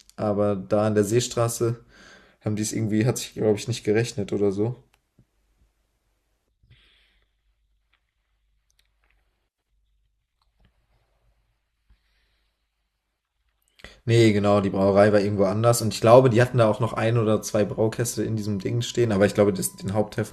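From 16.26 s to the end, a USB whine sits under the speech: a steady 1 kHz tone, roughly 40 dB below the signal, from the bus's 1 ms frame current leaking through power or ground. Its fixed 1 kHz pitch, not 50 or 60 Hz, separates it from mains hum.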